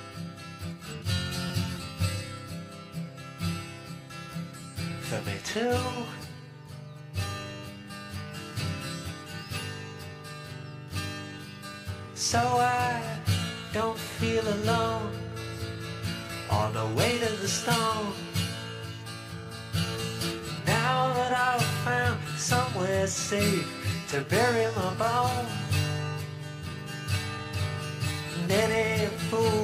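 Twice, at 1.47 to 1.50 s and at 26.72 s, fresh audio arrived late and the device replayed an 11.6 ms chunk, which fits a 512-sample buffer. Each repeated buffer is heard as a click or brief buzz.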